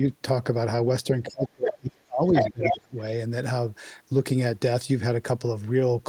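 A short speech recording in which the talker's level collapses between 1.23 and 2.97 s, with speech suppressed in double talk. Across that stretch the voice is pulled down, adding up to roughly one and a half seconds of attenuation, at its deepest by something like 30 dB. The likely cause is an echo canceller facing simultaneous talk from both ends: unable to tell the local voice from the loudspeaker return, it suppressed both. Inside the same window, the other side's voice leaks through, in two places. The first is a brief scrap at 1.66 to 1.73 s, sitting a few dB under the talker. The second is a longer stretch from 2.29 to 2.76 s that comes through at roughly the same level as the local speech. This is likely residual far-end audio, played on the talker's loudspeaker and picked up by the microphone, that the echo canceller failed to remove.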